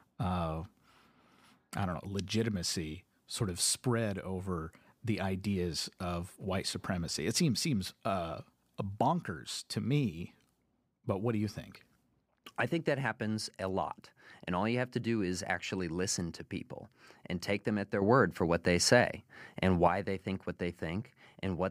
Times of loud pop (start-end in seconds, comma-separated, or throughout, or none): none